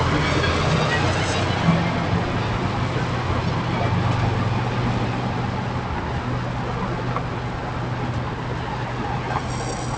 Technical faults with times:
0.00-9.98 periodic clock jitter

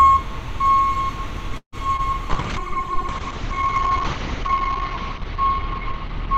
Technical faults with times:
1.57-1.75 call audio freeze
1.96-2.02 short concealed packet loss
2.34-6.38 call bitrate drop

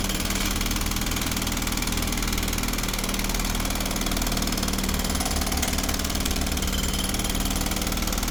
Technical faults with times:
0.00-8.30 low-bitrate audio saved at a high bitrate

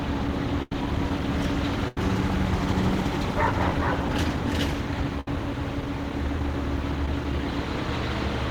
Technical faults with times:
0.62-0.72 burst of packet loss
1.88-1.97 burst of packet loss
5.20-5.28 burst of packet loss
7.06-7.08 short concealed packet loss

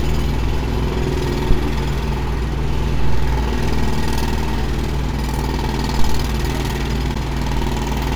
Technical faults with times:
1.51-1.58 phantom power thump
7.14 gap at a join of encoded pieces

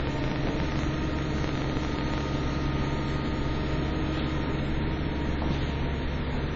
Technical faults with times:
0.00-6.55 WMA compression
0.00-2.22 train of clicks

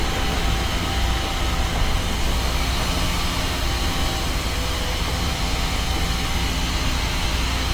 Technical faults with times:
1.34-7.23 periodic USB or driver dropouts

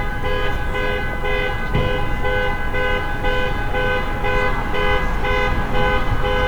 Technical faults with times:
0.00-6.47 low bit depth without dither

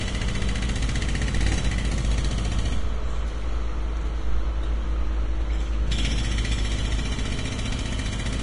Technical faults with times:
0.00-8.42 Vorbis compression

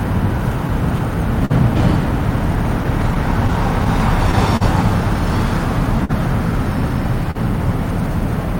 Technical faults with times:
0.00-8.60 clock drift between sender and receiver
1.45-1.52 short stall from a late packet
2.84-3.87 scattered short gaps
4.57-4.63 short stall from a late packet
6.05-6.11 short stall from a late packet
7.31-7.37 short stall from a late packet

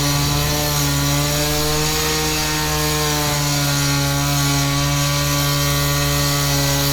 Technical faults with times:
none

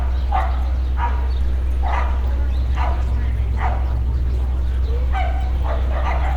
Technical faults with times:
3.02-4.99 call bitrate drop

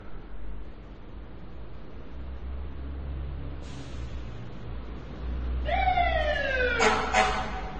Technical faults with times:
0.00-7.79 transcoding between lossy codecs

